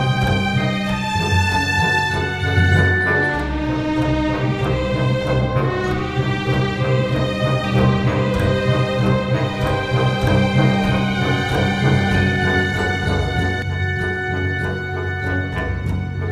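From 7.64 s to 13.62 s there's a doubled audio track: a second full-band copy running about one and a half seconds behind, at roughly the same level, with no decay or room colour, cutting in and out abruptly. It's likely a slower second capture path or an edit holding two copies out of step.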